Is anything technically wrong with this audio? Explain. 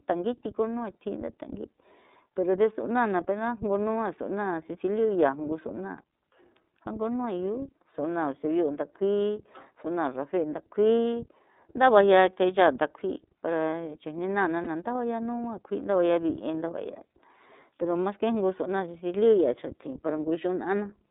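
Yes. The iLBC codec runs throughout: narrowband coding passes only about 250 Hz to 3.7 kHz, with a rough, synthetic edge that fits its 13.33 kbps, 30 ms-frame mode. Lost iLBC frames occur at 14.64–14.68 s, which fits one missing 30 ms frame. The decoder repeats the last pitch cycle with noise, giving a brief buzzy held sound, then recovers at once.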